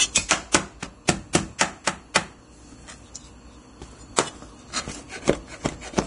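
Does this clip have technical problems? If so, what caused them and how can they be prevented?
Yes. The whole clip sounds hissy and grainy, with nothing above about 10.6 kHz. Fine treble detail has turned into rough noise, and transients lose their edge. That's heavy Vorbis compression, likely from a low-quality encode that fits a bitrate around 32 kbps. At that rate the encoder pulls the bandwidth down and quantises what's left of the top end so coarsely that detail becomes noise. To prevent it, encode at a higher quality setting or bitrate.

There's also pre-echo before several sharp attacks: a short smear of hiss at 0.52–0.54 s, 1.33 s, 1.58–1.61 s, 2.14 s and 4.16–4.18 s, each lasting roughly 17 to 26 ms. The codec spreads its quantisation noise across a whole transform block, so when a hit lands late in a block, noise meant for the loud part leaks into the quiet moment just before it. 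A higher bitrate keeps that noise low enough to stay hidden.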